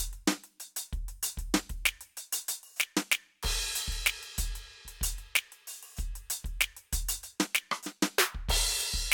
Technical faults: none

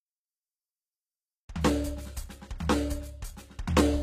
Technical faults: HE-AAC compression

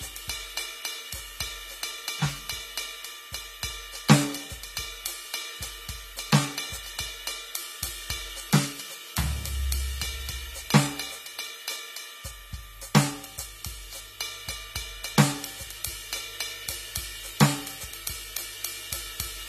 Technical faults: AAC compression

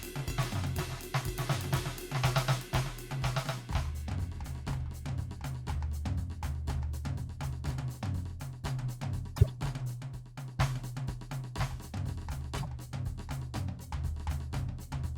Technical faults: doubled audio track; corrupt frame decoded

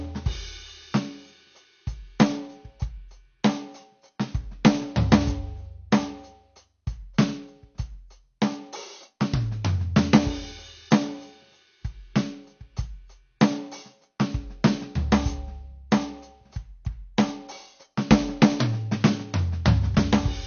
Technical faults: AAC compression

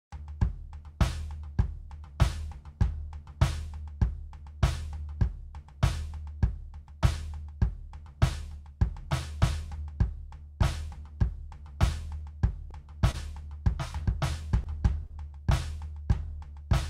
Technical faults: short stall from a late packet

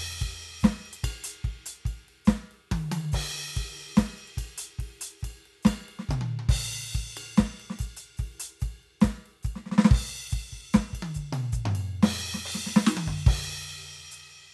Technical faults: MP2 compression

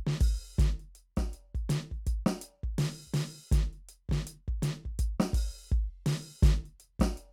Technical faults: none

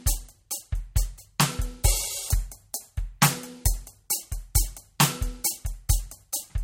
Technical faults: MP3 compression

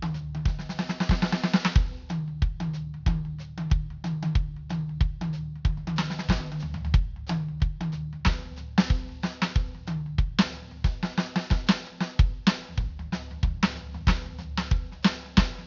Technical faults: aliasing

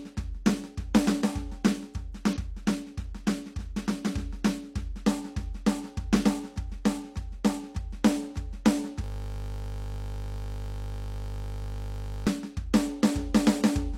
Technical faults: system hang loop

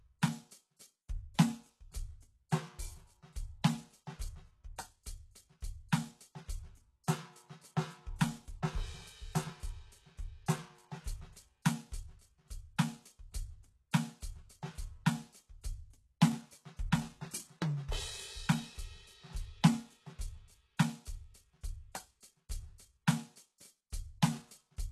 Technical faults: HE-AAC compression

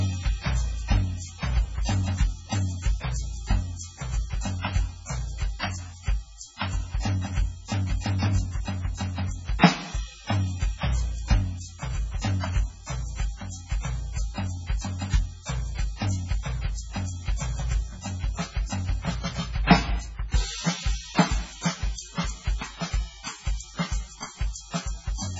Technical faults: MP3 compression

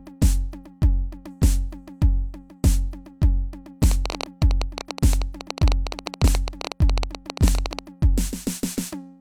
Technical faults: train of clicks

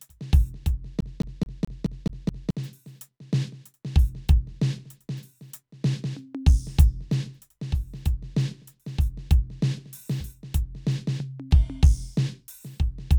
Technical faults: CD stuck on one turn

